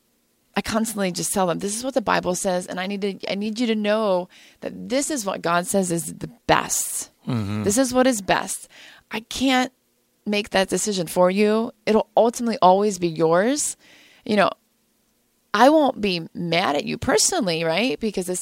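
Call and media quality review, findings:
No faults found on review; the speech clip shows no audible artefacts attributable to the capture, transport or playback chain.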